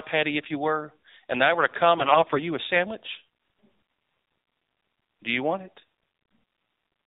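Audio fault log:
Throughout: AMR narrowband mobile codec. The speech is squeezed to 8 kHz sampling, so nothing above 4 kHz passes. That gives a muffled phone-line sound, and the buzzy, synthetic edge points to a low rate, something like 7.4 kbps, so the coding damage is plainly audible.
1.98 to 2.44 s: AMR bit errors. Right after "I were to come" and before "a sandwich", the speech goes hoarse, scratchy and gargly while roughly keeping its pitch and level. Corrupted frame bits push the excitation pulses and finer parameters off, consistent with roughly 5 percent bit errors.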